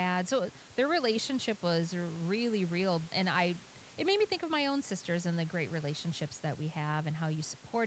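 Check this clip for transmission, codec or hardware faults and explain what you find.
Nothing stood out on listening; the top of the band ending around 8 kHz comes from the call's normal microphone processing, and the room's background noise sits about 24 dB below the speech.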